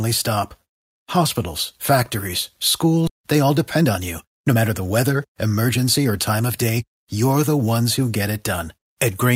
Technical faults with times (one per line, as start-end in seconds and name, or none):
3.07-3.09 skip ahead
3.18-6.77 jitter buffer speed-up